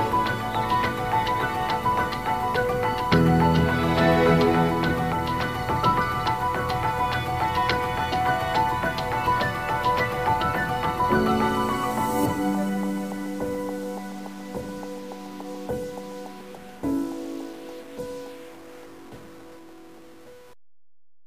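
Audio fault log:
throughout stuck bit: a grainy noise rides on the sound for the whole clip, and quiet gaps are filled with a steady hiss rather than silence, likely from one converter bit held fixed. Each affected sample is shifted by that bit's weight, a step near -45 dBFS, following the waveform's shape. On a spectrogram this shows as a broadband noise floor across all frequencies, even in pauses. On the waveform, small values look offset and jagged near zero.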